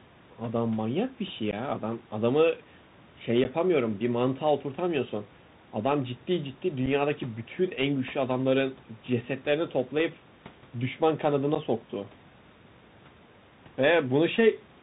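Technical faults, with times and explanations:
Throughout, Bluetooth CVSD headset codec: the speech has passed through the narrowband headset link, where each sample is coded as a single up-or-down bit at 64 kHz with an adapting step. Everything above 4 kHz is gone, so a spectrogram shows a hard ceiling there. Loud, fast-rising sounds outrun the step and distort, s sounds turn scratchy, and a fine granular hiss sits under the voice, with room noise about 30 dB down.
1.51–1.54, 3.44–3.47, 6.86 and 11.55–11.57, unconcealed Bluetooth headset packet loss: at each point a few voice packets between headset and phone were dropped and replaced with nothing, removing about 15, 11.2, 7.5 and 11.2 ms of audio. Each gap has abrupt edges. The speech returns briefly quieter as the CVSD step size rebuilds. On the waveform these appear as flat-cut holes, and on the spectrogram as thin vertical blank strips.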